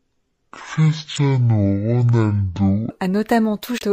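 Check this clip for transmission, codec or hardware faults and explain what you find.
Two faults are audible: a section at the wrong speed, and two bursts of damaged data in a compressed stream.

From 0.00 to 2.90 s the speech runs at half speed. Pitch drops about ten semitones with it, so the voice sounds deep and dragging. The likely cause is playback or editing against the wrong clock, stretching time and lowering pitch together.

Damaged data in a compressed stream appears at 1.14 to 1.18 s and 3.78 to 3.82 s. Corrupted bytes make the decoder misread those frames and lose sync. Each is heard as a brief glitch.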